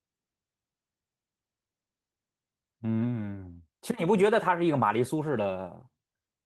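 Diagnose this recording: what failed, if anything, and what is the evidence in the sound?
Nothing in the chain has failed: the speech arrives continuous and at a steady level, with the full-bandwidth sound of Opus voice compression in its hybrid mode, its light coding texture consistent with a rate of around 20 kbps, and no dropouts, clipping, distortion or timing disturbances at any point.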